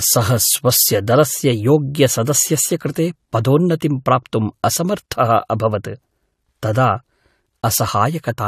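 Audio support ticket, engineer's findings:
Speech, whole clip: two layers of artefact texture, nothing above 14 kHz. Likely transcoding between lossy codecs: an MP3-type stage re-encoded to low-rate AAC-LC. The second encoder spends bits on the first one's artefacts and adds its own.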